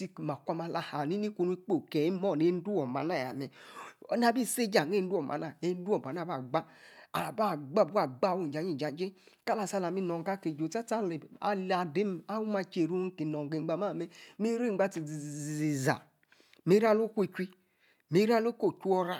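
No technical faults can be heard anywhere in the speech recording. There is nothing in it that needs a time or an explanation.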